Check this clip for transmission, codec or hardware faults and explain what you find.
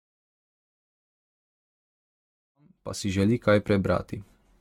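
One fault runs through the whole recording: generation loss. The speech sounds swirly, smeared and hollow, with blurred consonant attacks, more degraded than a single pass at around 96 kbit/s would leave. The likely cause is lossy encoding repeated roughly ten times, consistent with AAC-LC. Each decode and re-encode quantises on a shifted frame grid, so the noise and dropped bins accumulate. On a spectrogram, expect a hard ceiling with nothing above 17 kHz, patchy holes between harmonics, and smeared transients. The fade-in from about 2.5 s to 3.38 s rises smoothly, with no edge in the waveform.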